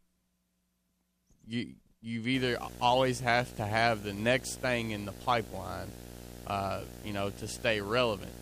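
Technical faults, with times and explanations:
2.34 to 8.42 s, video or display buzz: a screen or video cable couples into the speech path, adding a buzz at the 59.94 Hz field rate with hash above it and a thin 15.7 kHz line-rate whine, roughly 10 dB below the speech.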